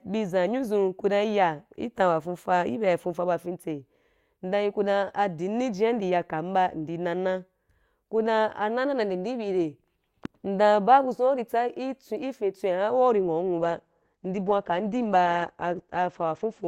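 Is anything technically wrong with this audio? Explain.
Yes. From 13.58 s to the end at 16.67 s, the speech plays from an adaptive stream at a lower bitrate. The stream switched to a cheaper encoding mid-playback, and the sound fits a step from around 64 kbit/s Opus down to about 12 kbit/s. The treble vanishes, leaving nothing above 9 kHz, and the speech turns duller, with codec artefacts. A spectrogram shows the upper band cut off abruptly at 13.58 s, while the waveform runs on without a gap.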